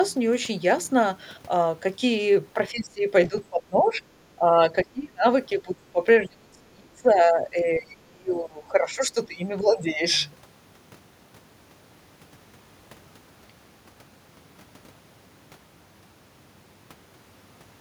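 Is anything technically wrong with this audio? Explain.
Yes. The speech repeatedly dips and breaks up at 2.54–3.08, 3.26–4.03, 4.36–4.55, 4.84–5.25, 5.56–6.03, 6.20–9.42 and 9.60–10.02 s. It drops by about 10 to 30 dB, deepest near 4.84 s, with the longest stretch lasting about 3 s. This is speech suppressed in double talk, likely an echo canceller turning its own talker down while the far side spoke.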